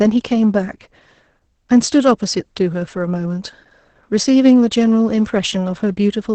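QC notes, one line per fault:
Throughout, sample clock jitter: the converter's clock wanders by around 2 microseconds, so each sample lands slightly off time. The error tracks waveform slope, adding a faint hiss and roughness some 40 dB under the speech that swells on loud, bright sounds and disappears in pauses.
Throughout, Opus voice compression: the SILK linear-prediction coder, working in wideband with 20 ms frames, is starved of bits, which fits a bitrate near 10 kbps. Nothing survives above 8.6 kHz and the excitation is coarsely quantised, leaving speech heavily muffled, hoarse and faintly robotic.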